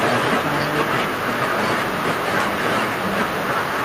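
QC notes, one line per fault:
No faults heard in this speech clip.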